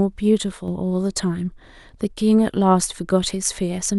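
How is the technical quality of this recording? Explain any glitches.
The recording has one glitch, a brief sudden gain jump. From 0.52 to 0.68 s the level drops by about 5 dB in a single step, then returns. The likely cause is a digital gain change applied without a ramp. The speech and the background noise fall together, which tells it apart from a fade or compressor action, where the change is gradual.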